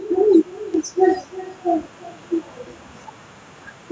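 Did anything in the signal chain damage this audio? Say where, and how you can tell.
Yes. At the far end of the call, the loudspeaker's playback leaked into that microphone and no echo canceller removed it, so the speech came back across the network. Throughout, each phrase is shadowed roughly 300 ms later by a thinner copy about 18 dB down. This is echo with no canceller.

A bit error spike occurs at 0.74 s. A single sample had one bit flipped in memory or on a digital link, so its value jumped by a power of two and snapped straight back. It is heard as one sharp, broadband tick unrelated to the speech.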